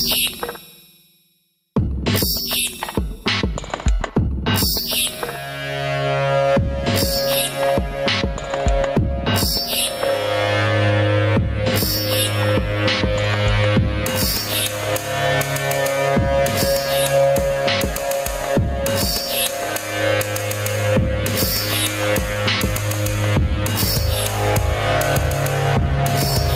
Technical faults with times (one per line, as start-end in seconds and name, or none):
0.00-26.55 gain pumping